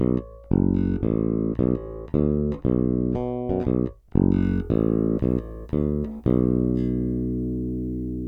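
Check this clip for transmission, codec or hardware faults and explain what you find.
One fault appears. From 4.43 s to the end, pre-emphasis is left on. The CD 50/15 µs treble boost was never undone, lifting 10 kHz about 8 dB above 1 kHz. The sound turns thin, bright and hissy. Unlike a simple high-shelf EQ, this follows that fixed standard curve.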